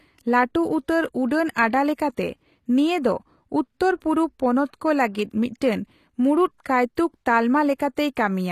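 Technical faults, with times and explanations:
Throughout: HE-AAC compression, plainly audible. The sound has a brightness in the upper range that does not quite belong to it, and s sounds come out gritty and lispy, with a metallic sheen. This is likely spectral band replication: only the lower spectrum is properly coded, and the treble is rebuilt by copying lower bands upward under a coarse envelope, so harmonics fail to align across the crossover. The damage fits a low bitrate around 24 kbps, and nothing remains above 14.9 kHz.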